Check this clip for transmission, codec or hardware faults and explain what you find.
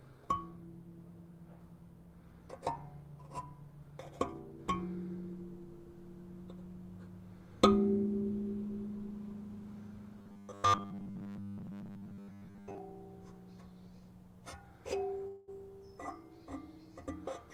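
Two faults are audible.

From 10.19 to 12.78 s there is robotic sound from repeated short buffers. A 10 ms chunk is likely being replayed, imposing a rigid 100 Hz metallic buzz over most of the audio.

From 15.27 to 15.50 s there is a long network dropout. About 200 ms of audio is likely lost and replaced by a fading buzz or hiss, with no silence before the sound returns.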